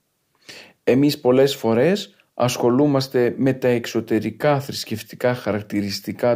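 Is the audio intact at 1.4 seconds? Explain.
Yes, the speech at 1.4 seconds is intact, with no dropout, click, distortion or other fault at that moment.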